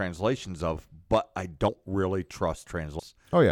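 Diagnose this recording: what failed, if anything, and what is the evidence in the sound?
Compressed frames skipped at the codec decoding stage: whole 32 ms frames are lost, so speech jumps ahead about a tenth of a second at 1.68 s and nearly half a second at 2.99 s. Spectrograms show abruptly broken formant tracks at each join.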